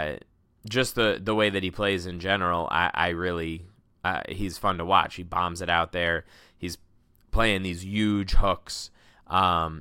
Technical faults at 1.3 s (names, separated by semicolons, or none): none